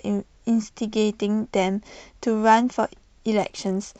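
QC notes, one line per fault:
3.37–3.99 s, Bluetooth SBC bit pool drop: treble suddenly dulls and gritty noise rises under the speech until the end, which fits a bit pool falling from 31 to 10, near 77 kbps. Unlike packet loss, nothing drops out. The sound stays continuous but coarsely quantised.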